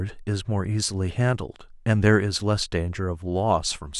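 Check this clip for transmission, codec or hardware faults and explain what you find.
One fault runs through almost the whole clip: clock slip clicks, from 0.18 s to 3.98 s. Two devices in the chain are likely running on separate, unsynchronised clocks that disagree by a few hundred parts per million. Roughly every 70 ms the drift adds up to a whole sample, and a single sample is dropped or repeated. There are around fifty slips in all, heard as faint regular ticks, clearest on loud or sustained sounds and absent in the pauses.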